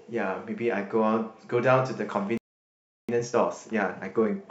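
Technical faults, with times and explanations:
2.37 to 3.09 s, playback stall: the speech cuts off mid-flow and the output sits silent for about 0.71 s before sound resumes. This is likely the player running out of buffered data or having its output thread blocked, leaving nothing to send to the device.
3.09 to 4.50 s, time-compressed catch-up: after the gap, the speech runs about 1.25 times faster at unchanged pitch. The player is shortening its backlog by dropping small segments and cross-fading the joins.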